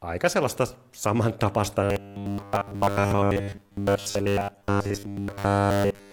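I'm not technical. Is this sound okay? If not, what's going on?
No. Right after "aika sellaista samantapaista", from 1.83 s to the end, the speech turns into a metallic buzz at 100 Hz: robotic sound from repeated short buffers. Roughly 70% of that stretch is repeated audio, likely tiny 10 ms pieces replayed while real speech is skipped. Unlike a steady background hum, this buzz takes the place of the voice and only loosely follows it.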